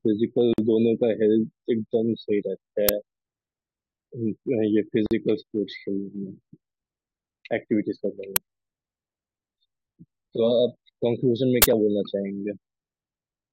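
Gaps at a join of encoded pieces break this speech recording at 0.53 to 0.58 s and again at 5.06 to 5.11 s. Each is a silence of about 47 to 49 ms: the sound drops out abruptly, with edges softened by the codec, then carries on exactly where it stopped. This points to segments that were encoded separately and spliced without trimming. The encoder's start-up delay and its last-frame padding both survive at each seam as dead time. Uninitialised buffer bursts hit at 2.89 s, at 8.36 s, and from 11.62 to 11.64 s. The first two are loud cracks, and the third, longer one is a loud burst of digital noise. The first two last about 5.3 ms, which fits a 256-sample block, and the third lasts about 21 ms, which fits a 1024-sample block. A buffer was sent to playback before any audio had been written into it, so whatever was left in that memory was played out as samples.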